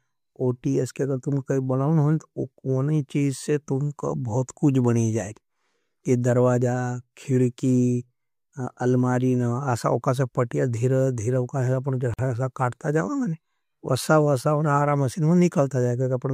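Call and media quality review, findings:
Speech drops out abruptly at 12.14 to 12.19 s, a 50 ms hole with smeared edges, then resumes where it stopped. Gap at a join of encoded pieces. Segments encoded separately and concatenated untrimmed; encoder start-up delay and final-frame padding remain as silence.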